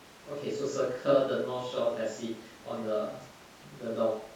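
No faults are audible anywhere in this speech recording.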